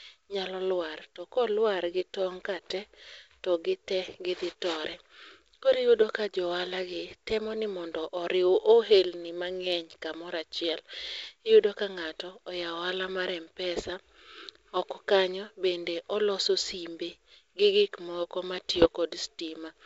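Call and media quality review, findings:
Bit errors on an ADPCM link, 18.70 to 18.88 s. Symptom: pops and a rough, gritty burst with brief level jumps, about 0.18 s long. Component: G.722 transmission path; wideband character and light upper-band hiss consistent with the 64 kbit/s mode. Mechanism: flipped bits, at a low rate under 1%, corrupt the decoder's step size and predictor, so each error rings on for several milliseconds across a handful of frames.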